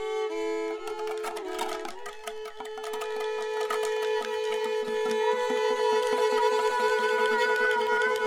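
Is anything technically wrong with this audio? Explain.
No, nothing technically wrong can be heard anywhere in this music.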